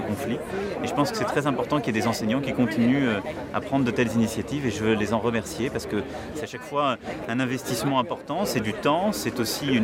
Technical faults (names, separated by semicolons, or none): audio missing between chunks